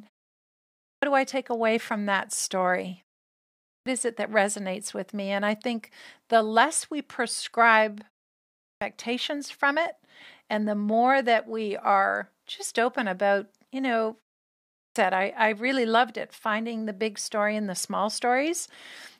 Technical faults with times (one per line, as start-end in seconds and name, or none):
0.53-1.03 clipped start after a pause
3.39-3.86 clipped start after a pause
8.36-8.81 clipped start after a pause
14.46-14.96 clipped start after a pause